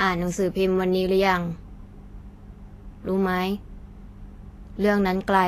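Vorbis compression runs throughout the speech, with nothing above 14.2 kHz. The treble is hissy and grainy and attacks are blurred. This is plainly audible damage that fits a bitrate around 33 kbps, likely from the codec quantising upper detail so coarsely it becomes noise.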